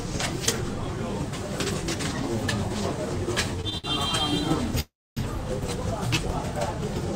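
Just past 3.6 seconds there's a quick run of three short stalls from late packets, at 3.61, 3.70 and 3.78 s. Each time a packet hadn't turned up on schedule, the jitter buffer ran dry, and the receiver held the last bit of sound until it landed, about 23, 19 and then 61 ms of stretching. Nothing gets lost. You just hear a brief smeared hold with a faint buzz or dip, and the third one drags the longest.

At 4.80 s comes a proper call audio freeze lasting until 5.19 s. This one most likely happened because packets were held up in transit long enough to empty the buffer completely. The receiver carries the last sound on as a fading buzz or hiss, and then roughly a quarter of a second of it drops to silence before the audio picks up exactly where it left off. About 365 ms of gap gets inserted, with nothing missing.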